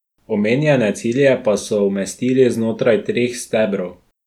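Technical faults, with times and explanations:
No technical faults can be heard in this speech clip.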